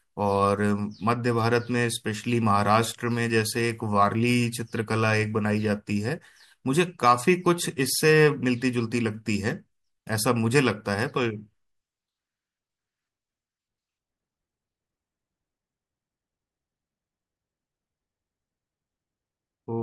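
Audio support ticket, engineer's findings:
No audible defect found anywhere in the speech recording; no component implicated, no action required.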